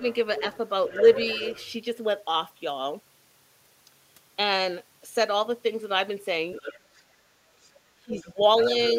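Speech suppressed in double talk at 0.00 to 0.04 s: the opening sound is pulled down by roughly 10 dB for a brief moment. The likely cause is an echo canceller that could not separate the near talker from the loudspeaker echo while both sides overlapped, so it turned everything down.

The other side's voice leaking through follows from 0.08 to 1.72 s, a second, quieter voice sitting around 10 dB under the main speech. The likely cause is far-end audio played on the talker's loudspeaker and not fully removed from the microphone signal. It returns from 6.52 to 7.02 s at around 15 dB down, and as a faint scrap at 7.63 to 7.70 s, far below the speech.

Speech suppression hits again from 8.02 to 8.41 s, where the talker dips by up to about 15 dB over roughly a third of a second. Leakage overlaps it from 8.14 to 8.91 s at about 15 dB below the speech.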